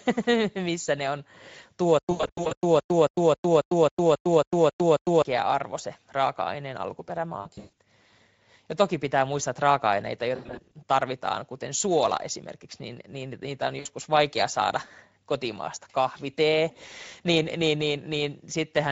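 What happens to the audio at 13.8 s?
At 13.79 s a short dropout from VoIP packet loss, concealed by the speech codec, runs to about 13.87 s. Roughly 60 ms of the stream, consistent with three 20 ms frames, never reached the decoder. The decoder bridged the gap by extending its last pitch and spectral envelope with a falling gain, so the speech smears into a brief buzzy tone or coloured noise that fades. Each rebuilt frame depends on the previous one, so the voice stays weak or distorted just after the gap closes.

Under this, and through the whole clip, the Speex codec is plainly audible. It runs at about 17 kbps. CELP coding at that rate has a limited bit budget for the excitation, which gives the speech a noisy, hoarse edge. The concealment at 13.8 s builds on that already coarse signal.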